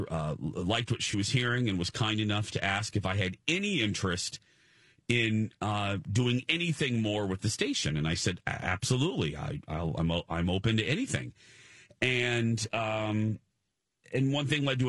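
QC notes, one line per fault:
throughout: low-delay AAC compression. The speech sounds rough and grainy, with noise filling the gaps between harmonics and a thin, synthetic top band. This is likely AAC-ELD at a low rate, around 32 kbps. Its short frames resolve pitch harmonics poorly.
1.11–1.14 s: AAC frame loss with concealment. Between "uh liked what she" and "was hearing and was", a brief smeared, noisy patch appears. About 20 ms is missing, which points to a single lost frame. The decoder patched it from the previous spectrum.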